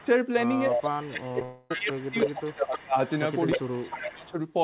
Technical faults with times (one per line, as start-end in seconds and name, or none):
0.00-0.05 speech suppressed in double talk
0.00-0.07 echo leak
0.69-2.95 speech suppressed in double talk
0.72-0.80 echo leak
1.14-4.14 echo leak
1.28-1.45 repeated packet loss (robotic sound)
1.45-1.71 long network dropout
3.57-4.34 speech suppressed in double talk